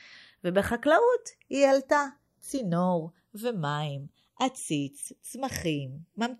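Two recording devices running on separate clocks, mismatched by something like 50 parts per million, cause the channels drifting apart throughout the speech. The delay between left and right creeps steadily, reaching roughly 0.4 milliseconds by the end. When the channels are summed to mono, that sliding offset moves the comb-filter notches gradually through the spectrum, so the speech takes on a slow, sweeping flanging quality that shifts in colour over the clip.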